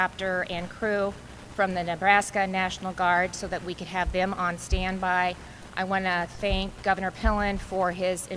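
No technical faults are audible anywhere in this audio.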